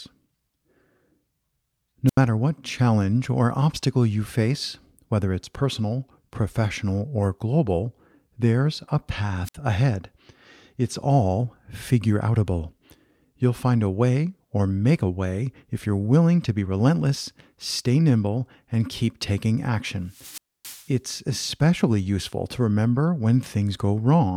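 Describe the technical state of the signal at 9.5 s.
A wireless microphone squelch dropout runs from 9.44 to 9.55 s. The FM radio signal fades, hiss briefly rises, and the receiver's squelch mutes the output. That leaves a hole of near silence lasting about 59 ms before the speech returns.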